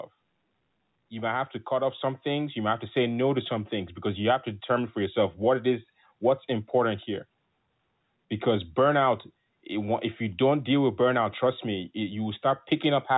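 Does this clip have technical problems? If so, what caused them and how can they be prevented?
Yes. Automatic gain rising occurs from 1.09 to 5.24 s: the gain control judged the input too quiet and raised its gain by about 6 dB, so the speech and background noise swell together. To prevent it, set a fixed input level or disable automatic gain control.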